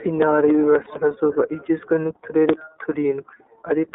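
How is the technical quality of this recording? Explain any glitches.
The technical quality is limited: the whole recording has passed through a low-bitrate narrowband codec, and there is one brief dropout.

Throughout the clip, the speech carries the sound of the iLBC codec. The band runs only from about 300 Hz to 3.7 kHz, so the voice sounds thin and telephone-like, with no air above that. iLBC codes each 30 ms frame's excitation on its own, which fits its 13.33 kbps mode. That coarse excitation modelling gives a plainly audible rough, slightly synthetic edge to the voice.

At 0.84 s, for about 30 ms until 0.87 s, there is a lost iLBC frame, consistent with one dropped packet. The decoder fills the gap by repeating the last pitch cycle blended with noise, so the moment sounds like a short held, faintly buzzy vowel rather than silence. Because iLBC frames don't depend on earlier ones, the voice snaps back to normal immediately after the gap.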